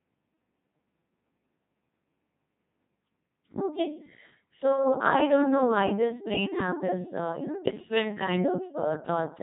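All the way through, the speech has that robotic, buzzy Codec 2 vocoder sound: resynthesised from pitch and envelope, heavily damaged, nothing above 3.8 kHz, which fits a 2.4 kbit/s mode.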